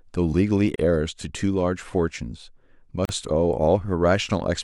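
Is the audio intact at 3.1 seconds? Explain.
No, not quite. Just before 3.1 seconds, two separately encoded pieces of this speech recording were joined without trimming the encoder's start-up delay and end-of-file padding, leaving a gap at a join of encoded pieces. From 3.05 to 3.09 s, a gap of about 38 ms cuts into continuous sound. Its edges are smeared by the codec, so the silent part is shorter than that, and the sound resumes right where it stopped.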